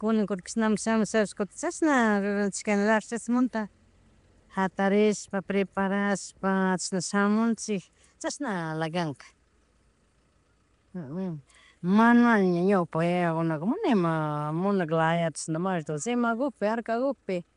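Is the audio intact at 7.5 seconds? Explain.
No. At 7.5 seconds, as across the whole clip, the speech carries a rough, hissy halo and a smeared, underwater quality, likely from Nellymoser compression: 256-sample blocks coded at two bits per sample, with weak bands replaced by noise. A spectrogram shows nothing above 10.6 kHz and speckled noise patches.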